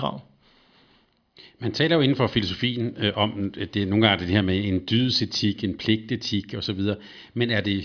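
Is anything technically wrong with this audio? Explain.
No, nothing technically wrong can be heard here.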